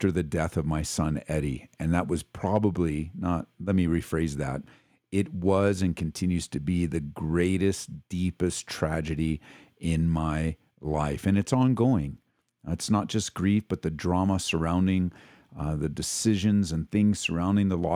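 No technical faults are audible.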